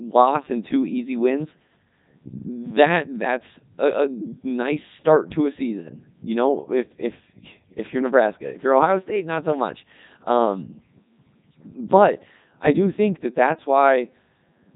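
Codec 2 vocoder damage runs through the entire speech clip, from start to finish. The voice is rebuilt at the decoder from sine waves driven only by pitch, voicing, energy and a coarse spectral envelope, so the original waveform is gone and the result sounds robotic and buzzy. Nothing survives above 3.8 kHz, and the heavy degradation fits the codec's top 3.2 kbit/s mode.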